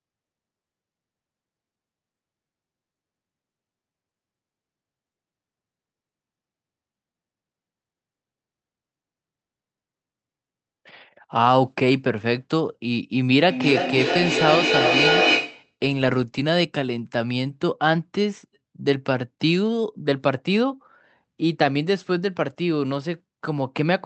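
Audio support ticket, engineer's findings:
Feedback echo between two devices, 13.49 to 15.75 s: repeats roughly every 300 ms, building to about 1 dB over the speech. A second device's speaker loops into the mic, past the mic's own echo canceller, which only removes its own device's playback.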